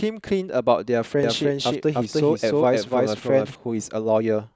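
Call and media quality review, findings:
Doubled audio track, 1.23 s to 3.55 s: speech heard twice, a second full-band copy trailing about 300 ms behind at roughly equal level. The copy is dry, with no decay or room colour, and cuts in and out abruptly at both ends. Likely cause: the same signal captured again through a slower path, or an edit holding two misaligned copies, summed into one mix.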